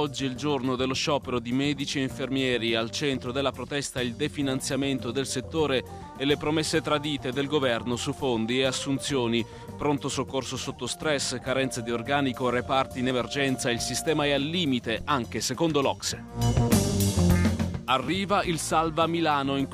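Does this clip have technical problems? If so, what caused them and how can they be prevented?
Yes. Audio missing between chunks occurs at 3.15, 8.13, 13.11 and 18.08 s, regular skips spaced about 5 s apart where a sliver of roughly 20 ms vanishes and the surrounding sound closes up with no gap of silence. That regular spacing points to a recorder or processor that likely handles audio in 5-second blocks and drops a few milliseconds each time it finishes one block and starts the next. To prevent it, use software or firmware that records continuously or overlaps its blocks, and give it enough buffer headroom that nothing is lost at the handover.

A phantom power thump runs from 15.01 to 15.09 s, a deep low-frequency bump that dies away quickly, with a decay of about 18 ms. It comes from phantom power or another supply being switched on or off while the input was live. The sudden voltage step passes through the coupling capacitors and reaches the recording as a thump. 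To prevent it, mute or pull down the channel before switching phantom power and leave it muted until the supply has settled.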